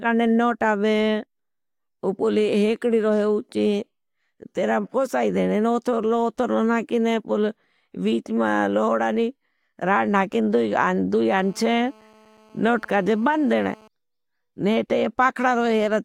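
GSM phone buzz runs from 11.34 to 13.88 s: a nearby 2G phone on a call transmits bursts at 217 Hz, and the audio circuitry rectifies them into a steady, hard, raspy buzz rich in harmonics, unrelated to the speech and about 30 dB below it.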